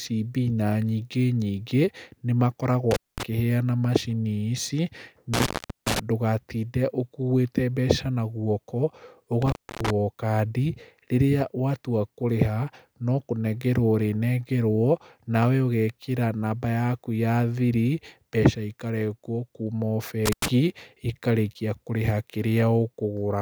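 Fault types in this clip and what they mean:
intermittent contact: a loose plug or cable briefly breaking the signal path, so the speech drops out with a crackle at each edge and faint hiss remains while the line is open. It happens four times, at 2.9 s, 5.3 s, 9.4 s (just before "o kandi") and 20.3 s, with open gaps of about 216 ms, 411 ms, 283 ms and 96 ms. The 411 ms break at 5.3 s is the longest.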